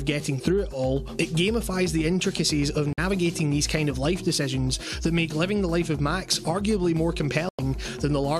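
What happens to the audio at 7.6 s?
At 7.6 s the sound is just coming back from a digital broadcast dropout that runs from 7.49 to 7.59 s. The receiver stopped getting usable frames, either because the signal was lost or because frames failed their checksum, and it muted until valid data arrived again. The result is a single hole of about 0.1 s, which fits roughly four lost frames. Unlike a concealment fault, nothing is smeared or repeated into the gap, and the programme simply resumes later with that stretch missing.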